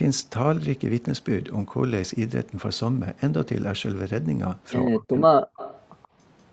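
Speech here, band-limited to nothing above 8 kHz by the call's normal mic processing. From 4.9 to 5.42 s the talker dips hard, something like 40 dB down for roughly 400 ms in pieces, which sounds like speech suppressed in double talk. The echo canceller most likely ducked everything while both sides spoke. Then there's echo leak. A copy delayed by 132 ms comes back at 5.56 to 5.8 s, about 20 dB under the voice, plus a faint scrap at 6.03 to 6.08 s, about 35 dB down, likely residual loudspeaker echo the far end's canceller missed.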